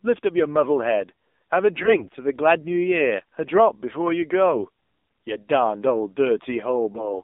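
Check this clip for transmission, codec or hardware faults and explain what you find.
Two faults are present: mobile codec damage across the whole speech clip, plus two short bursts of corrupted frames.

AMR narrowband mobile codec, throughout: the speech is thin, buzzy and synthetic, confined to 250 Hz to 3.7 kHz. Low-rate vocal-tract modelling, consistent with about 7.4 kbps, strips detail.

AMR bit errors, 1.76 to 2.09 s and 6.94 to 7.09 s: the speech turns hoarse, scratchy and gargly while keeping pitch and level. A few percent of weakly protected bits arrive flipped, misplacing excitation pulses.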